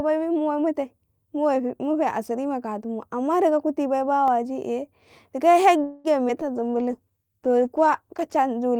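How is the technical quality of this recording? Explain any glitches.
The recording has a cluster of call-transmission glitches in its second half, plus one tiny dropout earlier on.

At 4.28 s, right after "kuti bai", there's a block of digital silence lasting about 1.33 ms, which fits a 64-sample block. Likely the buffer wasn't filled in time, so the output drops straight to silence and back. It's so short it comes across as a single tick.

From 5.83 to 6.07 s there's a call audio freeze. The sound hangs as a fading continuation of whatever came just before, adding about 210 ms, and then picks up where it left off with nothing lost. That's likely packets stuck in transit while the jitter buffer ran dry.

At 6.28 to 6.32 s comes short concealed packet loss. About 40 ms never reached the decoder, and the receiver papered over the hole by extending the previous sound. You hear a quick smear before the real audio blends back in.

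At 6.41 to 6.44 s there's a skip ahead. Around 70 ms of audio got dropped while later packets were already waiting, so playback jumps forward and splices the two sides together almost directly. It sounds like a small clipped-out chunk.

From 6.59 to 8.46 s there's a call bitrate drop. The encoder fell from 64 to 15 kbps and stayed at the bottom for about 1.67 s. Coarser coding and a trimmed top end make the speech sound rougher and duller until things recover.

Overlapping that, from 6.60 to 7.35 s, is a jitter buffer slow-down. The receiver padded in about 112 ms by repeating pitch periods to rebuild its reserve, so this stretch plays at roughly 86% speed at the same pitch. It sounds drawn-out.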